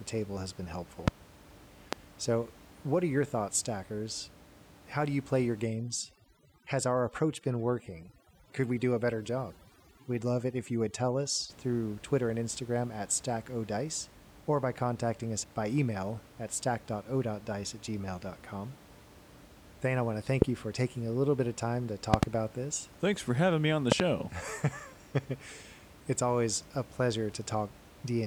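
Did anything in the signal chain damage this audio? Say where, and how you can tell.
Yes, two separate problems. First, loud pops at 1.08 s, 1.93 s and 20.42 s, then double pops at 22.14 to 22.25 s and 23.92 to 24.02 s. Each one jumps out roughly 20 to 25 dB above the speech, and the talking carries straight on underneath, so the pulse is being added on top of the signal. That points to the analogue wiring stage, likely a voltage transient from a plug, switch or static discharge.

Second, from 5.65 to 11.50 s there's overdone noise removal, which is a call-processing problem. The room noise, which sits about 23 dB below the speech, gets pulled down with little twinkly specks in the gaps. The suppressor is cutting individual frequency bands whenever they dip toward its noise estimate, so the quieter parts of the speech get cut along with the background.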